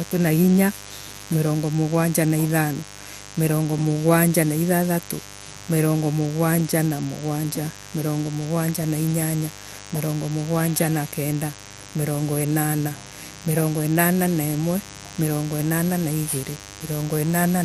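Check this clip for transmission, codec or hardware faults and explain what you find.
A mains buzz runs through the whole speech clip. A steady, raspy buzz sits about 20 dB below the speech. Sharp switching spikes on the 50 Hz supply leak in twice per cycle, spreading harmonics up to several kHz.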